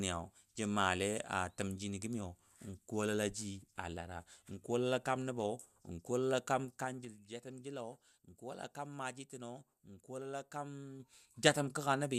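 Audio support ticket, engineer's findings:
Zipper noise at 6.55–7.23 s and 10.93–11.39 s: a ticking, zipping texture rides on the speech as the level drops roughly 10 dB and later rises about as much. The gain moves in unsmoothed 3 dB steps, around five and then seven per second, and each step clicks.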